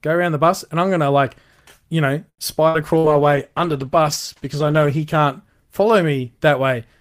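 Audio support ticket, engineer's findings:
Short stall from a late packet, 2.29–2.41 s. Sound held and stretched for about 90 ms, slight buzz or dip. Nothing lost; playback resumes at the same point. Component: receive jitter buffer. Mechanism: buffer ran dry waiting on a late packet.

Consequence: delay grows by 90 ms from here on. Concealment stretched the last audio instead of dropping anything. Consistent with a network delay spike, not loss.

Burst of packet loss, 2.68–2.77 s. Concealment fill for about 58 ms, then a jump. About 60 ms of audio missing. Component: receiver loss concealment. Mechanism: consecutive packets lost or arrived too late to play.

Burst of packet loss, 2.98–3.09 s. Same symptom. About 55 ms of fading fill, about 60 ms missing, plus about 7 ms inserted. Lands inside the bitrate drop below. Same component and mechanism.

Call bitrate drop, 2.84–6.46 s. Audio turns rough, watery or muffled. 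Encoder rate falls from 64 to 14 kbps and stays at the low rate for about 2 s. Component: sender congestion control and the Opus encoder.

Mechanism: bandwidth estimate collapsed, so the encoder codes coarsely and cuts the high band. Its onset follows the stall and first loss burst, so probably a network congestion episode.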